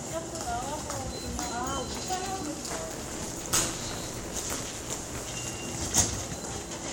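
Buffer tearing runs from 2.68 to 5.29 s. The writer and reader have drifted so each period splices in roughly two-fifths of audio about 20 ms stale, hard-edged on both sides. That produces a steady 172 Hz rattling buzz, which fits a 256-sample buffer.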